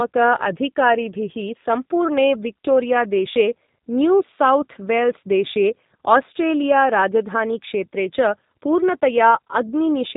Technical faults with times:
0.00-10.16 G.729 codec

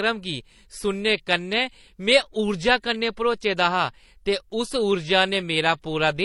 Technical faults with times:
0.00-6.24 transcoding between lossy codecs

